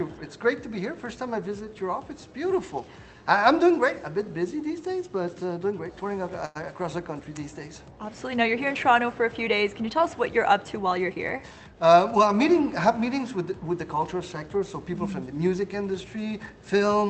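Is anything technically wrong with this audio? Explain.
Yes, there are two faults, both from the jitter buffer on a call path whose codec trims the top end above about 8 kHz.

From 6.45 to 6.57 s the sound stalls, with the last moment held and stretched for about 98 ms, adding a faint buzz or dip before the audio picks up exactly where it left off. This is a short stall from a late packet. The next packet had not arrived when due, so the jitter buffer ran dry. The receiver extended what it already had rather than going silent. Nothing is lost, but playback now runs about 98 ms later than before.

From 10.97 to 11.84 s the audio sounds hurried, running about 110% of normal speed while its pitch stays the same. This is a jitter buffer speed-up. The buffer was holding more audio than its target, so the receiver repeatedly cut out tiny slices one or a few pitch periods long. Altogether it removed roughly a tenth of a second to shrink the added delay.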